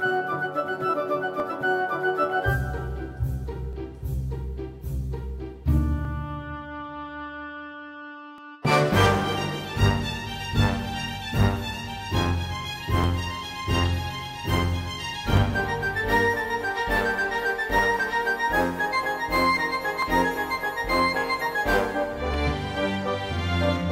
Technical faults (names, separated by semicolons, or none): clock drift buffer slips